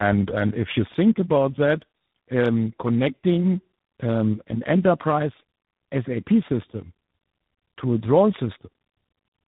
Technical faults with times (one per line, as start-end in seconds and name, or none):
0.00-9.47 tandem speech coding